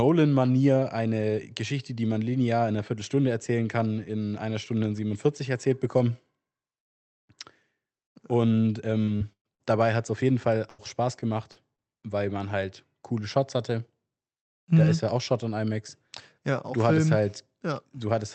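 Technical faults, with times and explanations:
8.89–10.10 s, repeated packet loss (robotic sound): four gaps fall in this stretch, ending just before "auf jeden". The longest is 119 ms, and about 240 ms of audio is missing. Each hole is bridged by stretching the last received sound, so about 221 ms is filled in, roughly 18% of the span, with about 150 ms roughly rebuilt. That gives the choppy texture. A single dropout would leave one clean hole, but here the gaps recur within about 1.2 seconds.
10.52–11.80 s, repeated packet loss (robotic sound): after "auf jeden" and before "weil man halt coole", four more gaps occur. The longest is 90 ms, with about 160 ms missing and roughly 165 ms filled in by continuing the preceding sound, about 13% of the span, with about 100 ms roughly rebuilt. This second burst is lighter than the first. It is still unlike steady codec coloration because it comes in bursts rather than lying across the whole clip. 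The underlying call path fits Opus at around 40 kbps, with its audio band ending at 8 kHz.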